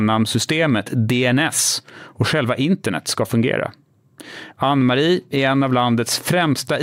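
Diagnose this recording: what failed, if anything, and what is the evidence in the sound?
Nothing failed in this recording, and the sound gives no evidence of any fault.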